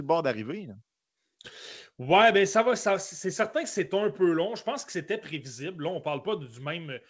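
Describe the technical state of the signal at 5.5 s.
At 5.5 s the speech is intact, carried cleanly by the G.722 call path, which leaves nothing above 8 kHz.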